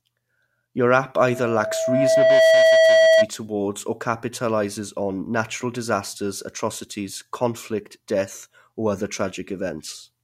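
From 1.17 to 3.28 s, a loudspeaker feedback squeal: the microphone re-amplifies its own output until the loop runs away at 647 Hz, swelling over about a second and a half to roughly 10 dB above the speech before "towards or capitalizes on". Spectrogram: one bright horizontal line.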